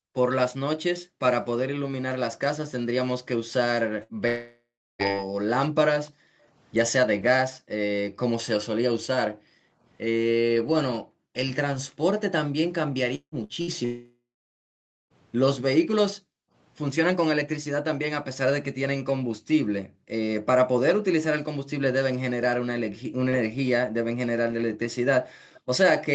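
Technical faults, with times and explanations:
Throughout: background gated by the echo canceller. The room sound behind the voice keeps dipping away while the far-end loudspeaker plays, at its deepest by about 40 dB, then swells back when the canceller releases. Unlike a network dropout, the speech itself carries on unbroken. Only the ambience is pumped up and down, because the canceller turns the whole microphone down hard instead of removing just the echo.
4.03–4.13, 13.44–13.52 and 13.61–13.70 s: burst of packet loss. Each is a short hole of about 60 ms that the receiver papers over with roughly 50 to 60 ms of its own fill. The last sound is stretched into a brief held buzz or hiss that fades, and then the speech jumps ahead with that slice gone. It is too short to reach real silence, which is what separates it from the longer dropouts nearby.
4.28–5.02, 13.15–13.35 and 13.85–15.13 s: long network dropout. 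The audio gaps for about 0.72, 0.18 and 1.26 s. Each time the final sound is smeared into a fading buzz or hiss that thins into dead silence, lasting about 0.33, 0.09 and 0.89 s, before the talk resumes further on with the middle lost. A likely stall in the stream outlasted what concealment could cover, so unlike a packet-loss burst it ends in audible silence.
6.09–6.45 and 25.54–25.61 s: echo leak. A faint, delayed copy of the voice trails the original by about 0.3 s. It sits very low, on the order of 30 to 35 dB beneath the speech. Residue that likely slipped past a loudspeaker-side echo canceller was sent back down the line. Its fixed lag behind the speech distinguishes it from room reverberation, which would follow immediately and smoothly.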